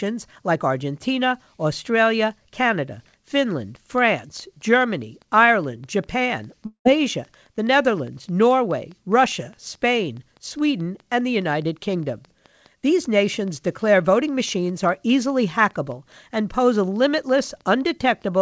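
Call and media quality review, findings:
Train of clicks, 3.76 s to end: regular ticking at 4.84 per second, peaks roughly level with the speech, audible in pauses too. Likely external pulse injection (equipment interference, faulty connection or power supply). Spectrogram: evenly spaced vertical broadband lines.

Long network dropout, 6.66–6.87 s: 200 ms of audio likely lost in transit. Jitter buffer filled 191 ms by extending the last sound as a fading buzz, about 100 ms silent, then speech resumes. Waveform: decaying smear, then flat; spectrogram shows G.722 8 kHz ceiling.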